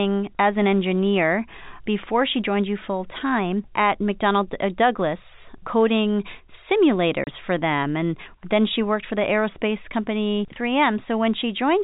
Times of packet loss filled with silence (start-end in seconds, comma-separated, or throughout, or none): 7.24-7.27